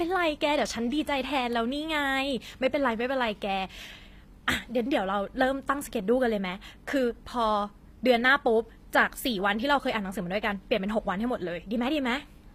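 Throughout the speech, the treble sounds rebuilt rather than captured. Nothing reaches above 15.5 kHz. The damage is plainly audible, and s sounds come out gritty and metallic. The likely cause is HE-AAC compression copying lower bands upward, which fits a bitrate near 24 kbps.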